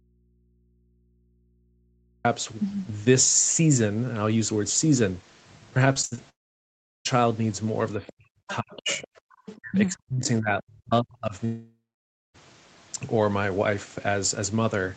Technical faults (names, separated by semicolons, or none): audio dropout to a faint residue; repeated packet loss (robotic sound); long network dropout; speech suppressed in double talk; other side's voice leaking through; background gated by the echo canceller